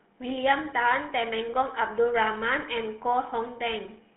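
Throughout, the speech sounds buzzy and gravelly and goes dead above 3.8 kHz. This is GSM full-rate codec damage: pulse-excited vocal-tract coding, consistent with 13 kbps.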